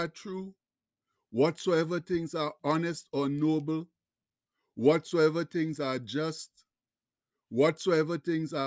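No technical faults can be heard anywhere in the recording.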